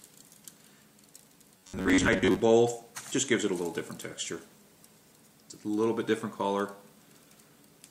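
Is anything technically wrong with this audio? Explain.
Yes. From 1.58 to 2.40 s there is robotic sound from repeated short buffers. The sound becomes a rigid, metallic buzz at about 94 Hz. Its likely cause is audio arriving too late, with roughly 11 ms chunks, most of the stretch, replayed in place of the missing material.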